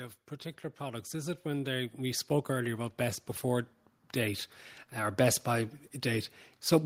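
From 0.77 s, just after "of particular", automatic gain rising sets in. The gain control judged the input too quiet and kept lifting its level to the end at 6.85 s. Voice and background swell together, and the waveform envelope and spectrogram noise floor both climb steadily.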